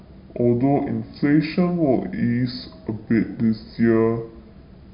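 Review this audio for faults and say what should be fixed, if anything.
Throughout, the speech sounds low and dragging, about 7 semitones down at two-thirds speed: a wrong sample rate, which fits 24 kHz audio played back at 16 kHz without conversion. Prevent it by resampling to the output device's rate, or tagging files with their true rate.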